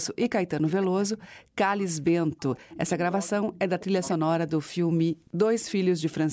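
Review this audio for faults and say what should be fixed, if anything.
Echo leak at 0.02–1.29, 2.05–2.11, 2.7–4.15 and 5.19–6.14 s: a copy of the speech about half a second late, roughly 15–30 dB down. It is likely from a loudspeaker echo canceller that let playback back into its microphone. On a spectrogram it shows as faint repeated harmonic patterns offset by about 0.5 s.

Speech suppressed in double talk between 0.87 and 5.01 s: the speech dips by as much as about 40 dB, for around two seconds in total. This is likely a canceller muting both talkers at once. On the waveform it appears as sudden envelope holes within speech.

To prevent both, retune or replace the echo canceller for better double-talk detection and deeper echo suppression, or use a headset instead of a loudspeaker.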